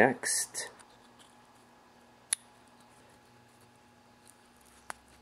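Nothing stood out as a problem on listening to this recording.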